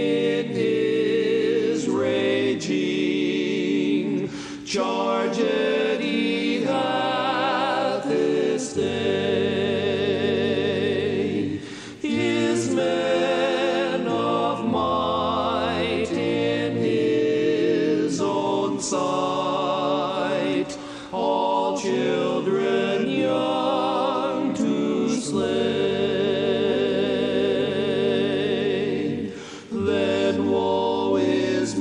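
Nothing goes wrong anywhere in the recording, so there's no technical fault to point to at any moment.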